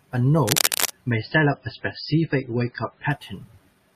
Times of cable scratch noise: 0.45-0.91

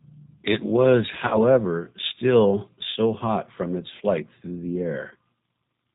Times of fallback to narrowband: none

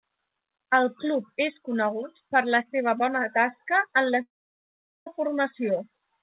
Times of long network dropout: 4.22-5.07

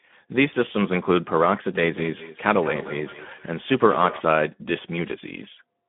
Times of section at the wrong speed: none

